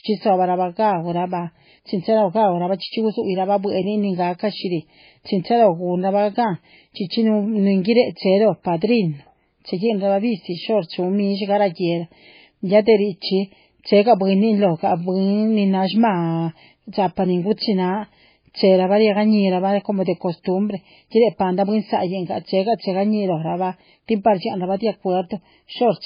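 From start to finish the speech has a hard ceiling at 5 kHz and a watery, swirling texture, with s sounds turned into metallic chirps and consonant onsets smeared. This is likely MP3 compression at a very low bitrate, consistent with roughly 16 kbps, where the encoder drops the treble and zeroes weak frequency lines frame by frame. On a spectrogram, energy stops at a flat line at 5 kHz, and patchy holes flicker below it.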